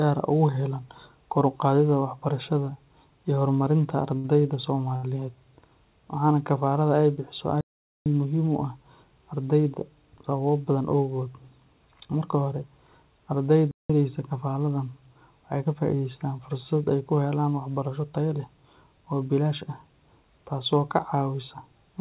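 Speech, heard through a narrowband call chain with nothing above 4 kHz, which fits G.711 mu-law at 64 kbps. At 4.18 to 4.26 s and 4.96 to 5.05 s a sound is held unnaturally long, with a slight buzz or dip, for 60 and 70 ms. These are short stalls from a late packet: the jitter buffer ran dry, so the receiver stretched the last audio until the packet arrived. Nothing is lost, but each adds that much delay. The audio cuts to silence from 7.61 to 8.06 s, about 0.45 s, and again from 13.71 to 13.90 s, about 0.18 s, then resumes. These are playback stalls, likely the player running out of data or having its thread blocked. From 15.66 to 16.07 s the speech sounds hurried, running at about 113% speed with unchanged pitch. This is a jitter buffer speed-up: to shed excess buffered delay, the receiver cut out pitch-period-length pieces in quick succession, removing roughly 70 ms.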